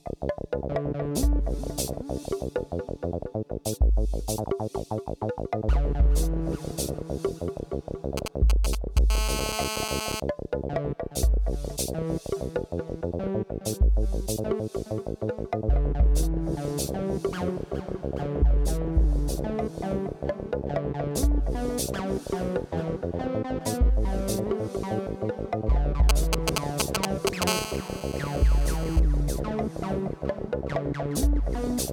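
At 8.17 to 8.99 s, GSM signalling bursts appear, a little quieter than the sound. A nearby 2G phone is exchanging short groups of radio bursts with its network. The audio circuit rectifies them into a galloping dit-dit-dit of brief 217 Hz buzzes. The same pattern returns at 26.09 to 27.44 s, about as loud as the sound itself.

From 9.10 to 10.20 s, a GSM phone buzz follows, about 6 dB below the signal. The phone is now in a call and transmits steadily 217 times a second. The rectified pulses give a hard, raspy 217 Hz buzz, rich in harmonics. It recurs at 27.47 to 29.00 s, about 10 dB down.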